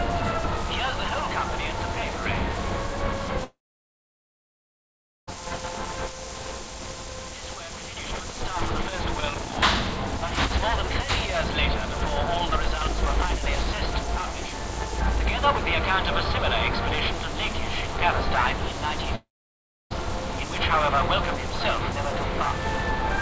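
At 3.44 s the sound breaks into a brief fading buzz and then falls silent until 5.29 s, with about 1.7 s of that gap empty. The same happens from 19.15 to 19.92 s, with about 0.66 s of silence. Each is likely a long network dropout. The receiver stretched the last audio briefly before giving up, and the lost stretch never returns. On a waveform each gap shows as a short decaying tail followed by a flat line. On a spectrogram it is a blank vertical band beneath the constant 8 kHz ceiling of the call codec.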